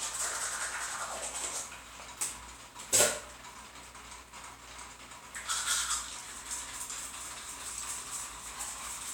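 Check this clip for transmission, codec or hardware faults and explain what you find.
No faults heard.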